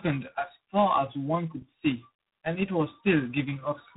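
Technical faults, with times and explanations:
Throughout: tandem speech coding. The speech passes through two low-rate coders in sequence, likely an iLBC stage and then a G.726 stage near 24 kbit/s, with the second working on the first's errors. This compounds the roughness and warble, and nothing remains above 3.8 kHz.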